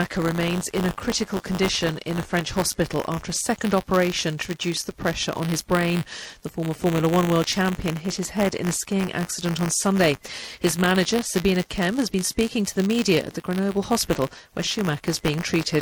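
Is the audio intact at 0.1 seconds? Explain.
No. At 0.1 s the sound already carries a steady robotic buzz at 100 Hz, present wherever there is signal and continuing through the whole clip. This is buffer tearing: the writer and reader of the playback ring buffer have slipped, so in every period a small slice, around 2 percent, holds audio from about 20 ms earlier, spliced in with hard joins. The 100 Hz rate points to a 10 ms buffer period.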